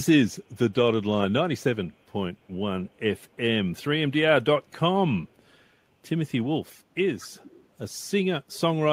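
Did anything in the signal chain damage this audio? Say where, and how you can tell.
Yes. A faint, delayed copy of the speech trails behind it twice: a brief, very quiet scrap at 2.95–2.99 s, around 40 dB down, and a longer, clearer stretch at 7.36–7.67 s, about 25 dB below the speech, both lagging by 287 ms. This is an echo leak in the call processing, likely a far-end loudspeaker whose echo canceller let some of its microphone pickup slip through and returned it down the line.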